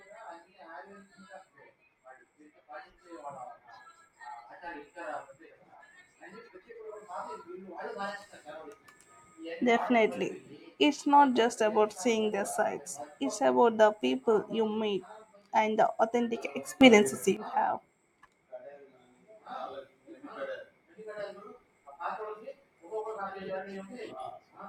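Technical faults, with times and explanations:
16.81–17.37 s, sudden gain jump: the level steps up by about 12 dB in a single instant and the speech and background noise rise together, then drop back. Unlike automatic gain control, there is no gradual swell. The likely cause is a gain setting applied without a ramp.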